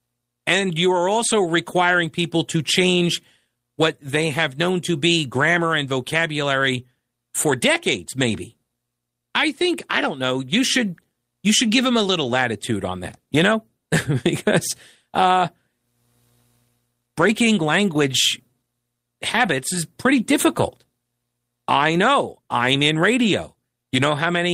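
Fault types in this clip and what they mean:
Lost packet rebuilt from error correction: at 1.43, 17.21 to 17.31 and 19.45 s the speech never drops out but briefly turns rougher and noisier, for about 20, 60 and 20 ms, which fits single packets and one run of three. The decoder played a low-bitrate copy carried in the following packet, so unlike a gap or concealment smear, the sound stays continuous and coarsened.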